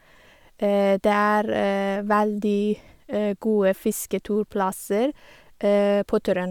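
No audible faults in it.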